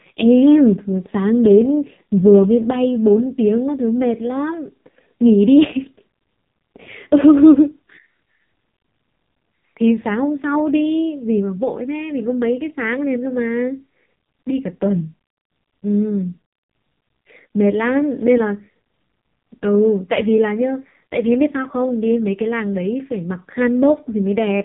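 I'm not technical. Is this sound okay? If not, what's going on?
No. From start to finish, the speech was squeezed through the AMR narrowband mobile codec, the older phone-call codec, set to one of its lowest-quality modes. It rebuilds the voice from a rough model of the throat and mouth instead of keeping the real sound, and it throws away everything above about 3.8 kHz. The result is a muffled, boxy phone-line sound that has lost its crispness, with a heavily damaged, buzzy and synthetic-sounding voice.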